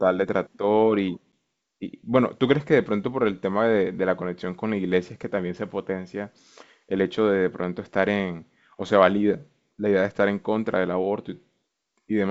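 A hard-edged 10 ms gap of silence at 1.33 s, then briefly unsettled speech: packet loss on an ADPCM call, with one packet dropped and the decoder's predictor and step size knocked out of step.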